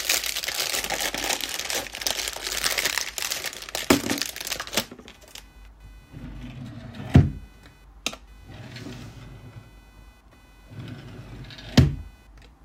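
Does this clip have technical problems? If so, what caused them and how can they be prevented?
Yes. Computer activity noise runs through the whole clip, under the sounds. It is a fine, buzzy chirping that pulses at around 500 Hz, roughly 30 dB below the wanted sound. It follows the computer, not the recording. Load changes in the processor, graphics card or mouse move the ground the audio circuit shares, and that shift leaks into the signal. To prevent it, use an external or USB-isolated audio interface with proper grounding.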